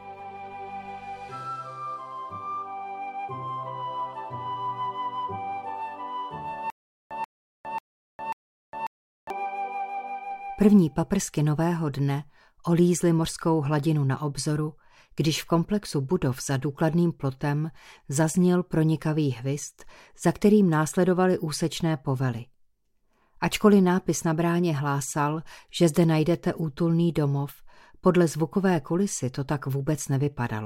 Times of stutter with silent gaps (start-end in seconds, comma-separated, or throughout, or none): 6.70-9.30